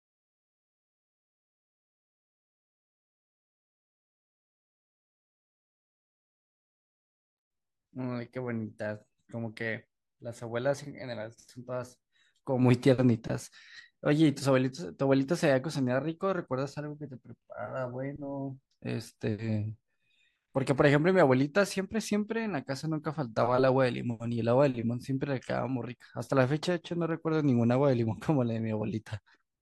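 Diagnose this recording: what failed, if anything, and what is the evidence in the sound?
Nothing in the speech signal points to a failure at any stage of the chain, with no audible discontinuity, distortion or dropout anywhere in the recording.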